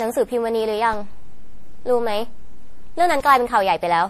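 Generation loss runs through the whole speech clip, likely from the audio being decoded and re-encoded around seven times, which fits repeated MP3 passes at about 64 kbit/s. Each pass quantises on a shifted frame grid, so the sound turns swirly, smeared and hollow, with blurred attacks.

At 0.93 s a DC step shifts the waveform's zero line to a new offset, which holds until 3.20 s and then drops back. Each jump lands as a low thump or click, while the speech carries on unchanged through the step.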